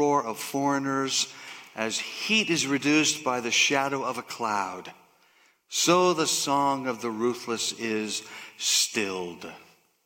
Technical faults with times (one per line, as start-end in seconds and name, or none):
none